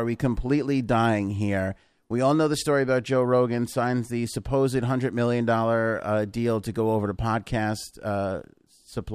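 Nothing in the recording calls for comment; it comes through without any technical trouble worth noting.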